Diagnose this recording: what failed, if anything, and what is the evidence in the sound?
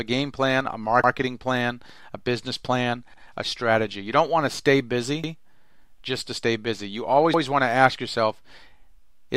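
The chunked processing stage, at the driver or buffer level, failed to butt its 2-second blocks together. Each block started 100 ms before the previous one ended, so these overlapping chunks replay a stretch of audio at the joins. Stutters land at 1.04 s, just after "game plan a" and before "plan a business plan", at 5.24 s after "don't want to stay", and at 7.34 s. Each repeats 100 ms and is heard as a brief stutter or click at the seam.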